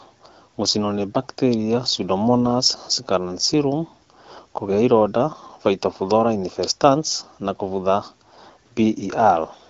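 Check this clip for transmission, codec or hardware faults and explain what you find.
No faults can be heard anywhere in this speech.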